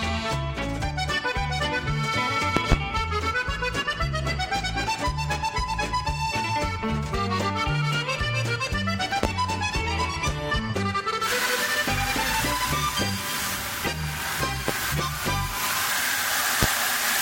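Loud pops occur as a double pop at 2.57 to 2.75 s and single pops at 9.23, 14.68 and 16.63 s, each far louder than the surrounding sound, which continues beneath them. They are likely voltage spikes from a plug, switch, static or driver glitch.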